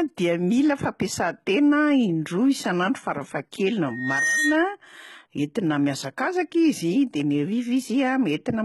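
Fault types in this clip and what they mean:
HE-AAC compression: likely the cause of the gritty, metallic treble throughout, rebuilt from lower bands rather than simply dulled, with nothing above 11.8 kHz; this fits a low bitrate around 16 kbps.
Loudspeaker feedback squeal: a single 1.9 kHz tone swells over roughly 0.4 s from 3.88 s to 4.75 s, reaching about the speech's level, unlike a steady hum.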